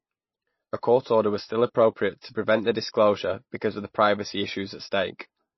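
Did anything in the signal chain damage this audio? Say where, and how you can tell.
Yes. The speech sounds watery throughout, with nothing above 5.8 kHz. This is likely codec-stage MP3 compression, with treble cut and weak lines dropped, which fits about 23 kbps.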